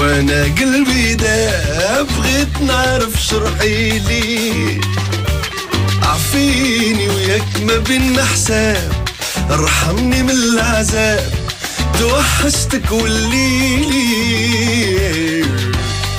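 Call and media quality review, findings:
No faults found in this call and media quality review.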